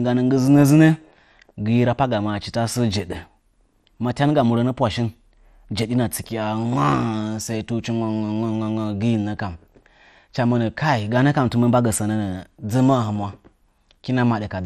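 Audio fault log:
throughout MP2 compression, likely the cause: the speech is dull, with nothing above 15 kHz and a plainly audible gurgling, granular grit from coarsely quantised sub-bands, which fits a low rate near 64 kbps. That sub-band grit, not smooth muffling, sets it apart from simple low-pass filtering.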